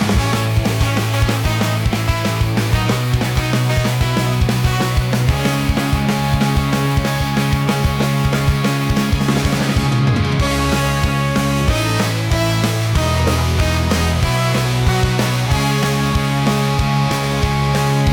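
Nothing here trips the ear at all; the audio just rolls along from the first moment to the last without a single glitch, dropout or odd artefact worth pointing to.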